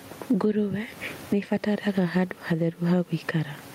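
Throughout the speech, the level is pulled down on each loud sound, swinging by around 15 dB, so loud and soft parts end up closer in level and the sound is squashed. This is gain pumping, likely from input gain set far too high and a fast limiter clamping down on peaks; the room noise sits about 36 dB below the speech.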